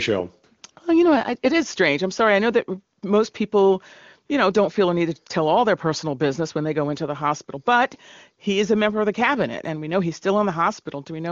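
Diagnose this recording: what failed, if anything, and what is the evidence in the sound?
AMR comfort noise in call processing: at 0.61 s and 0.71–0.75 s before "well you know I", and 2.99 s after "sorry I know that", steady synthetic hiss replaces the background, unlike packet-loss silence.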